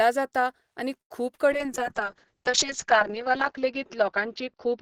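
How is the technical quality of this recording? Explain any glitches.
Three network-related faults affect the speech in quick succession.

Short stall from a late packet, 1.01 to 1.12 s: the jitter buffer ran dry, so the last sound is held for about 89 ms before resuming, with nothing lost.

Short concealed packet loss, 1.34 to 1.40 s: about 40 ms never arrived, and the receiver extrapolated the preceding sound, leaving a brief smear or wobble.

Call bitrate drop, from 1.52 s to the end: the encoder fell from 32 to 6 kbps, and the bandwidth narrowed from 20 kHz to 6 kHz. The speech turns muffled and rough, worst for about 1.4 s.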